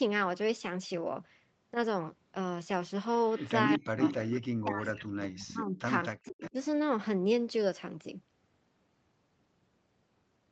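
Speech with two call faults. An echo leak returns a copy of the voice 243 ms late. It is faint at 3.3 to 3.69 s, louder than the speech at 4.01 to 4.43 s, and about 10 dB below the speech at 5.27 to 6.51 s. A loudspeaker echo the canceller missed is the likely cause. Speech suppressed in double talk drops the voice by up to about 40 dB at 3.68 to 4.01 s and 4.57 to 6.57 s. It likely comes from the canceller turning its own talker down along with the echo.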